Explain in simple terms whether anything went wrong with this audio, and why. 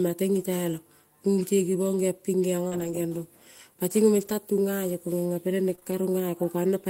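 Between 2.67 and 5.93 seconds, a handful of small pieces of the audio, about four, went missing or arrived too late on their way to the listener, which is called scattered short gaps. Together they add up to about 100 ms, the longest roughly 40 ms. The receiver covered each hole by stretching the sound just before it, reworking about 240 ms in all. The speech stays clear, but you hear brief ticks, smears or little hiccups there.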